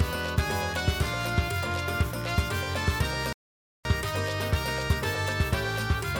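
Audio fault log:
3.33–3.85 s, playback stall: the sound cuts out mid-flow for about half a second, then resumes, likely because the player briefly ran dry or got blocked.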